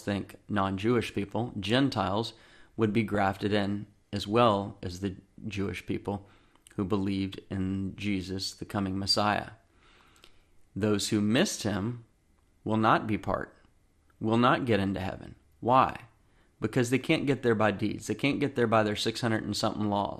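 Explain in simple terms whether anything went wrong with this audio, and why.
The speech sounds dull and gurgly throughout, likely from MP2 compression: too few bits, so the upper frequency bands drop out and what remains sounds grainy.

DAB burbling appears at 3.10 to 3.18 s, between "would be" and "in as well as", and at 18.33 to 18.45 s, just before "there by their": brief blips of noise where data errors corrupted a few audio frames.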